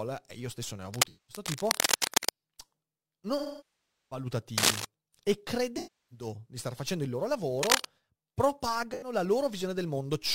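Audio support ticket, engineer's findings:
Sample clock jitter, whole clip: fine hiss and roughness riding on the speech, strongest on loud and bright passages, gone in pauses. Converter clock unstable by around 10 microseconds RMS. The timing error scales with waveform slope and sits roughly 15 dB below the signal.

Scratch noise, 0.94–2.31 s, 4.58–4.85 s, 7.59–7.86 s: dense, uneven rustling bursts over the speech. First burst roughly level with the speech, the later two somewhat louder. Likely cable scratch noise from a worn cable, connector or control whose contact resistance is jumping.

AAC frame loss with concealment, 1.07–1.43 s, 3.38–4.25 s, 5.77–6.26 s, 8.91–9.12 s: smeared, noisy, phasey patches lasting 213, 341 and 85 ms; the 725 ms gap decays to a faint noise floor and fades back in. These fit roughly 5, 17, 8 and 2 lost frames. The decoder is rebuilding each gap from the last good spectrum.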